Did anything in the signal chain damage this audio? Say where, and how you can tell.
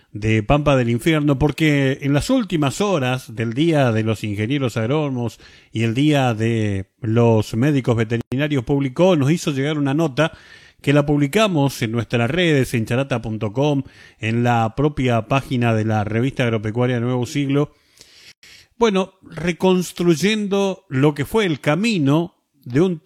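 Yes, the codec stage did. There's a gap at a join of encoded pieces at 8.21 s and again at 18.32 s, a silence of about 110 ms each time, dropped straight into continuous sound with its edges smeared by the codec. Afterwards the sound resumes exactly where it stopped, so nothing's missing, just time inserted. The 10-second spacing gives it away: the audio was encoded in separate chunks and butted together untrimmed, leaving each run's start delay and final-frame padding in place.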